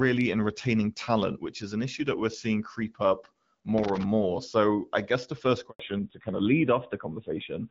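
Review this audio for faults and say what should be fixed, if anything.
Right after "we're seeing creep up", from 3.78 to 4.04 s, there's a burst of loose connector crackle. A worn or dirty contact is flickering open and shut, chopping the signal into ragged scratchy bits for about a quarter second. Clean or reseat that connector, or swap the cable.

After "I guess the first", at 5.70 s, there's a handover gap. The call jumped networks and no frames came through for 100 ms, so the sound drops out completely and that bit is simply gone. Keeping the device on one network during recording would avoid it.

Straight after the gap, from 5.80 s to the end, there's a fallback to narrowband. Before that the line had HD Voice, which is wideband and fairly clean. From here nothing above 4 kHz survives, and the sound turns duller and a bit rougher, which fits a low-rate narrowband AMR mode taking over. 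Locking the link to wideband or recording locally would prevent it.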